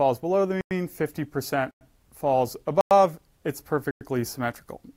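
Four gaps between chunks interrupt the sound, at 0.61, 1.71, 2.81 and 3.91 s, each a hard-edged silence of 100 ms. They arrive after every 1.0 s of audio, so the material was delivered in one-second chunks with dead air inserted at each join. Nothing is missing on either side of a hole; the sound simply resumes where it stopped. That separates it from dropouts, where content vanishes, and the strict 1.1 s spacing rules out random glitches.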